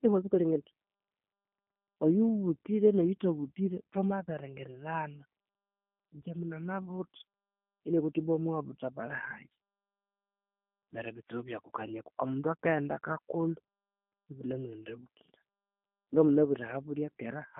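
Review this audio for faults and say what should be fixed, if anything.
Across the whole recording the speech sounds rough and faintly synthetic, with no air above about 3.6 kHz, while the low end thins out below roughly 200 Hz. That is G.729 codec damage, plainly audible: the codec discards the waveform and rebuilds each 10 ms frame from a vocal tract filter, a pitch predictor and a few pulses, at a rate that fits 8 kbit/s G.729A, inside a 200 Hz to 3.4 kHz telephone band. Capturing or relaying the call with a wideband codec such as G.722 or Opus instead of G.729 would avoid it.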